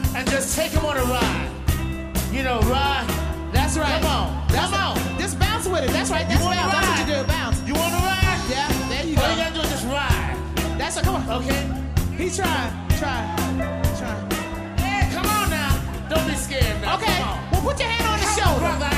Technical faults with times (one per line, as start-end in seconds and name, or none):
6.20-9.10 feedback whistle